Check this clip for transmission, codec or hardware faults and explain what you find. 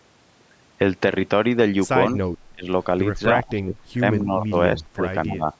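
Two call-path faults are present, both typical of a speakerphone with imperfect echo control.

Echo leak, 2.08 to 2.14 s. A brief, faint copy of the speech returns about 254 ms late, roughly 35 dB below the direct sound. The far end's echo canceller likely missed part of its loudspeaker pickup and sent it back.

Speech suppressed in double talk, at 2.52 to 2.68 s, 3.39 to 4.02 s, 4.20 to 4.56 s, 4.77 to 5.03 s and 5.26 to 5.49 s. The speech dips by roughly 10 to 25 dB, deepest in the first two. This is likely an echo canceller mistaking overlapping talk for echo and turning it down.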